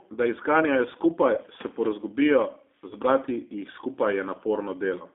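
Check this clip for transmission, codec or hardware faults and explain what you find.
Two faults are audible in this speech clip: low-bitrate codec coding throughout and two short dropouts patched over by the decoder.

G.729 codec, throughout: the speech is rebuilt from a vocal tract filter, pitch predictor and sparse pulses, which fits an 8 kbit/s G.729A stream. The band runs only from about 250 Hz to 3.6 kHz, and the sound is plainly rough and synthetic.

VoIP packet loss concealed by the speech codec, 1.35 to 1.40 s and 2.88 to 2.95 s: the first comes after "da jih zganjajo" and before "se porazgubijo zbrati", and the second after "se porazgubijo". About 20 ms and 30 ms of audio went missing, which fits two and three lost 10 ms frames. The decoder extrapolated from its last pitch and filter, producing a brief, fading smear that stays distorted as normal packets resume.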